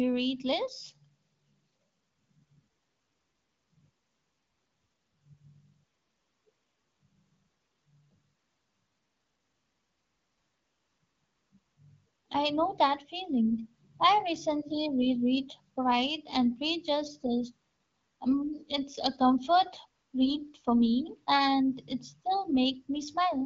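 No technical faults are present: the speech comes through the AMR wideband (HD Voice) codec at 12.65 kbit/s, a rate at which that codec keeps speech clear, with only light coding effects.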